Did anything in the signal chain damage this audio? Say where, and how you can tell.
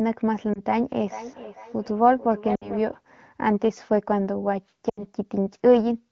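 Yes, at the network stage: lost AMR speech frames. A warble at 0.54 to 0.61 s fits one lost 20 ms frame. At 2.55 to 2.72 s and 4.89 to 5.05 s the sound drops to near silence within two frames as the decoder repeats old pitch and vocal tract settings at falling gain.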